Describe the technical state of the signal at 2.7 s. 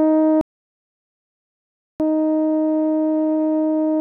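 The music at 2.7 s plays through intact, with no audible fault at that moment.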